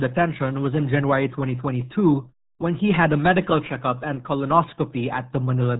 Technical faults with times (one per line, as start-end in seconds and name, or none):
0.00-5.80 RealAudio 14.4 codec